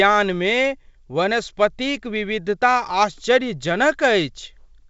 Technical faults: none

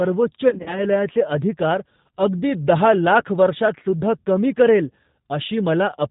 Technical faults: G.729 codec; VoIP packet loss concealed by the speech codec

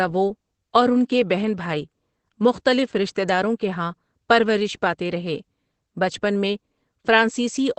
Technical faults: Opus voice compression

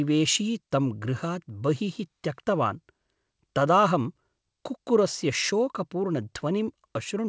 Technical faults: clock drift between sender and receiver; repeated timing corrections

